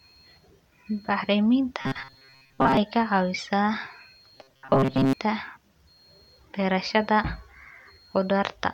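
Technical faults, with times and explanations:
1.81–2.77 s and 4.38–5.13 s, robotic sound from repeated short buffers: the speech collapses into a rigid, metallic buzz fixed at 134 Hz that still loosely tracks the syllables. The likely cause is late audio delivery, with the software looping a snippet of about 7.5 ms, which sets that pitch, so most of each stretch is repetition and real audio is skipped. Unlike codec warble, the pitch stays locked instead of following intonation.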